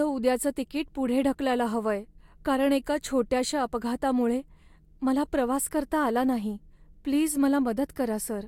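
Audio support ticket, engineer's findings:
Speech signal checked with no technical faults found, and nothing on the audio path needs attention.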